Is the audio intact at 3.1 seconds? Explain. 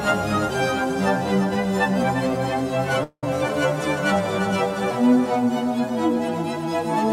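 No. From 3.03 to 3.24 s the music stalls into a fading buzz and 60 ms of silence, then resumes where it stopped: a call audio freeze, likely from delayed packets emptying the jitter buffer.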